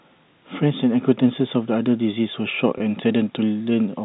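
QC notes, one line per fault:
2.78–2.80 s, packet loss with pitch repetition: a 20 ms stretch of the speech goes missing, which fits one dropped packet on a G.711 telephone stream. The receiver bridges the hole by replaying the last pitch cycle it had, so instead of a click or dropout you get a brief held, slightly buzzy tone. At only 20 ms it never gets to fade into silence, and the speech picks up again straight after.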